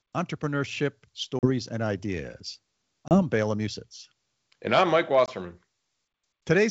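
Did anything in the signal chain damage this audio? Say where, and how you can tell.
Yes. Packet loss on an ADPCM call, at the network stage, leaves hard-edged silent holes at 1.39–1.47 s, 3.08–3.22 s and 5.26–5.29 s. Unlike a clean buffer dropout, each return comes back slightly distorted while the G.722 decoder's predictor and step size resynchronise.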